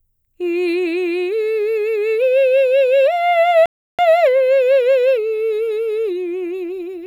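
At 3.66 s the music halts for about 330 ms, a playback stall, likely from the player running short of data, and resumes at 3.99 s.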